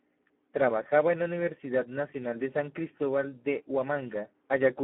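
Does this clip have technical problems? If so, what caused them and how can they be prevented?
Yes. Throughout, the speech carries heavy Speex codec damage: hoarse and noisy, squeezed into a telephone band of about 200 Hz to 3.4 kHz with nothing above 3.8 kHz. This points to a low bitrate near 8 kbps starving the excitation. A plain band-limiting filter would sound muffled but clean, not buzzy. Prevent it by using a higher Speex quality setting or a modern wideband codec such as Opus.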